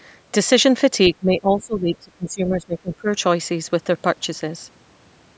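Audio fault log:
1.1–3.09 s, speech suppressed in double talk: the speech sinks by roughly 20 dB for about two seconds. This is likely an echo canceller mistaking the near talker for loudspeaker echo while both sides spoke, and turning both down.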